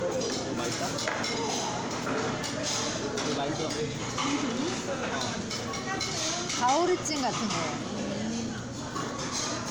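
Generation loss runs through the whole clip. The sound is swirly and hollow, with a watery smear over sustained parts. Attacks blur instead of landing cleanly. Content stops at about 19.9 kHz. The likely cause is repeated lossy coding, about four passes, each quantising again on a shifted frame grid. The noise and spectral holes build up with every pass. The character points to MP3 at around 96 kbit/s, yet it sounds worse than one encode would.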